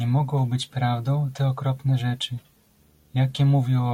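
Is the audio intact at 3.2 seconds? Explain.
No. From 2.79 s, just after "prawdą te okropne rzeczy", a display or video cable couples into the audio path, causing video or display buzz: a faint 75 Hz field-rate buzz with hash above it that runs to the end.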